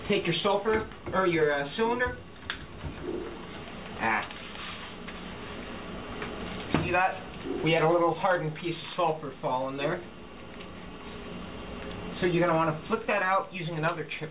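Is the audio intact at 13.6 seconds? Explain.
Yes, the audio at 13.6 seconds is intact, with no fault at that moment; the call path's narrow telephone band, with nothing above 4 kHz, is simply how this audio passes through.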